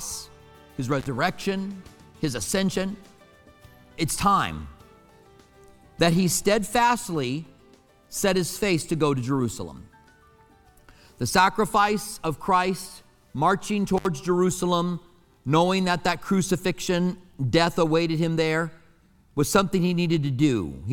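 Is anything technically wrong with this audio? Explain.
Yes, there's an intermittent contact fault, twice: once from 0.99 to 1.07 s and again from 13.97 to 14.06 s. It sounds like a loose plug or cable briefly losing connection. The signal drops out for roughly 56 ms the first time and 67 ms the second, with a crackle as the contact breaks and remakes. During each gap the sound vanishes and only a faint hiss is left on the open line.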